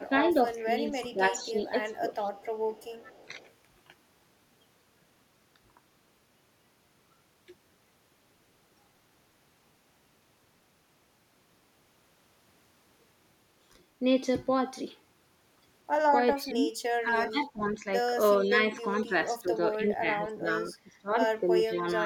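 It's a speech clip where the talker gets pulled down, likely speech suppressed in double talk: dips of about 10 dB in the first 2.1 s, then from 16.38 s to the end up to about 20 dB, roughly three seconds total. There's also a faint echo leak, likely from a loudspeaker, a copy 425 ms late from 0.57 to 3.51 s, much louder from 17.76 to 19.02 s, and again at 22.02 s.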